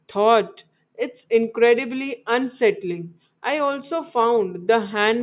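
No dropouts, glitches, distortion or level jumps turn up anywhere in this speech recording.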